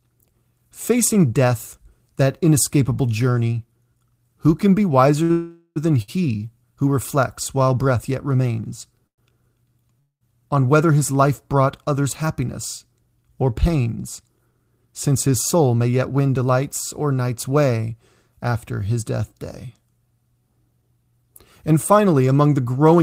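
At 5.23 s a short stall from a late packet stretches the last sound by about 60 ms: the packet arrived behind schedule, the jitter buffer ran dry, and the receiver held the preceding sound until it came, then resumed at the same point. It runs straight into a call audio freeze from 5.31 to 5.78 s, where the held sound carries on as a fading buzz for roughly 445 ms, ending in about 40 ms of silence before the audio picks up exactly where it stopped. A second short stall at 6.02 s holds the sound for about 61 ms in the same way.

Two more call audio freezes follow, at 9.07 to 9.20 s (108 ms, of which about 90 ms is silent) and at 10.00 to 10.23 s (212 ms, about 120 ms silent). In each, the last sound decays into a brief buzz and then quiet before the audio resumes without skipping anything, so the pauses are inserted rather than content lost. The likely cause is packets delayed in transit, leaving the receiver nothing to play until they arrived.

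From 14.38 to 16.43 s a jitter buffer speed-up runs the speech about 10% fast while pitch stays unchanged, trimming roughly a fifth of a second as the receiver repeatedly cut out pitch-period-length pieces to shrink an over-full buffer. It sounds noticeably hurried. A milder one, about 6% fast, runs from 20.71 to 22.28 s and removes around a tenth of a second.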